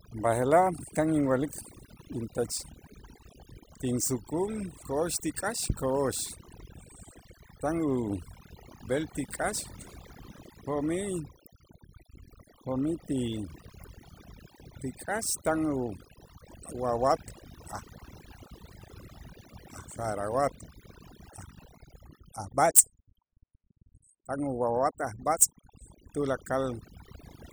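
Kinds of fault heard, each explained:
Overdone noise removal: The noise reduction was pushed too hard on noisy speech, throughout the clip. Frequency bands close to the estimated noise are cut far down or removed. Quieter parts of the voice vanish with them. Pauses fall to near silence with twinkling specks.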